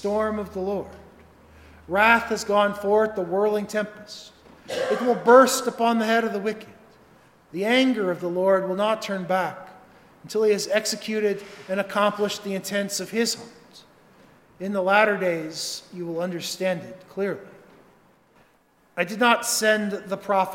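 Nothing goes wrong anywhere in the clip, so there's no fault to point out.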